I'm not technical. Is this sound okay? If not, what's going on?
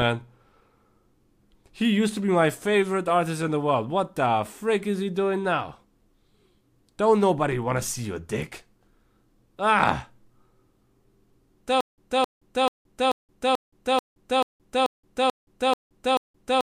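No. From 11.8 seconds to the end of the clip there is a stutter with silent gaps. The playback or stream most likely stalled, and each time it retried, it replayed the last bit of speech it had and then ran dry. You hear the same quarter-second snippet (about 0.26 s) repeat 11 times, each followed by a short silence (about 0.17 s), so it returns roughly every 0.44 seconds. The speech that should have played during that stretch is lost.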